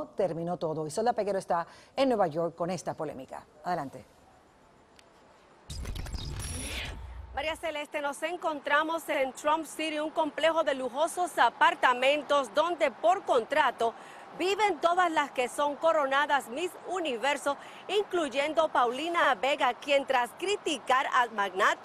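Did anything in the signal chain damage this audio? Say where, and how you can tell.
Yes: overlapping chunks at 4.09, 9.14, 14.19 and 19.24 s. At the buffer stage, each 5-second block starts early, replaying 50 ms as a regular stutter.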